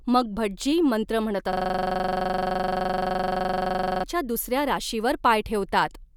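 At 1.53 s the speech locks into a system hang loop until 4.04 s. The same 42.67 ms slice repeats about sixty times while the system stalls. That fits a 2048-sample ring buffer. It sounds like a rough 23.4 Hz buzzing stutter.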